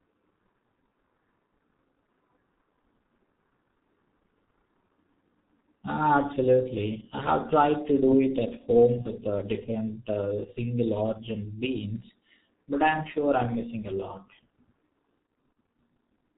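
Throughout, the speech sounds muffled and hoarse, with blurred consonants and nothing above 4 kHz, which fits heavy damage from the G.723.1 codec at around 6.3 kbit/s. From 9.02 to 9.08 s, between "do it at home" and "uh different uh single", and again from 15.53 to 15.56 s, the sound briefly turns into a fading buzzy tone or coloured noise. This is VoIP packet loss concealed by the speech codec: a 30 ms frame went missing, and the decoder filled the gap by extending its last pitch and filter at a falling level.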